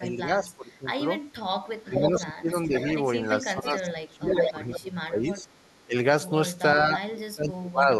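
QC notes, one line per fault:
0.00–0.88 s, 1.84–2.75 s, 3.43–5.47 s, 5.86–5.95 s and 6.76–7.88 s, speech suppressed in double talk: in each stretch the speech sinks by about 15 to 25 dB, deepest near the end. The longest dip runs through most of the 3.43–5.47 s window; the one at 5.9 s is just a brief gulp. The likely cause is an echo canceller that couldn't tell this talker apart from the far side's echo while both were speaking, so it pulled everything down together.
1.99–2.21 s, 2.79–4.79 s and 5.29–5.85 s, echo leak: a copy of the speech comes back about half a second late. In the first two spots it's roughly as loud as the original, so the 2.79–4.79 s run sounds like two overlapping takes. By 5.3 s it's faint, about 25 dB down. Likely a speakerphone on one end whose canceller let its own loudspeaker output slip back into the mic and return down the line.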